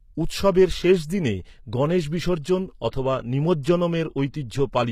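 From start to finish the treble sounds synthetic: sibilants come out gritty and a bit lispy, and there's nothing above about 14.9 kHz. That's likely HE-AAC compression at a rate fitting roughly 20 kbps, with the highs rebuilt from copied lower bands that don't quite match.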